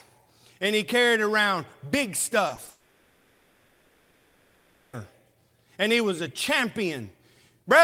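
Just after "he carried around big", short concealed packet loss strikes three times in quick succession, at 2.47, 2.55 and 2.65 s. Each time about 0.02 s of the call reached the decoder too late, and the receiver stretched the preceding sound to cover the hole, leaving brief smears and wobbles in the speech.

Straight after the third loss, from 2.69 to 4.95 s, the incoming stream likely stopped arriving altogether, a long network dropout lasting about 2.2 s. The receiver keeps extending the last sound across the entire gap instead of falling silent, producing a synthetic, drawn-out stand-in. Speech then resumes further on, without the lost stretch.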